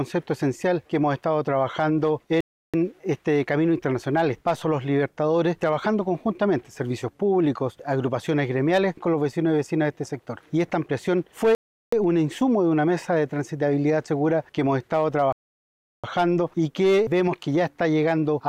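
At 2.41, 11.55 and 15.33 s the sound drops to silence for about 0.33, 0.38 and 0.71 s, then resumes. These gaps are likely a Bluetooth stall, where interference delayed packets and the headphones' buffer emptied before retransmissions arrived.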